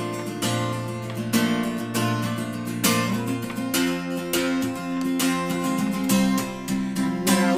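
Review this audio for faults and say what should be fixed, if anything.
Nothing here needs fixing, since no faults turned up anywhere in the recording.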